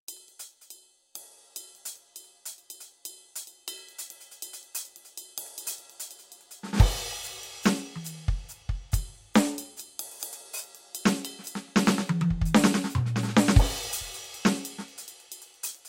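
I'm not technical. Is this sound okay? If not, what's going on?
Yes, this music has no technical faults.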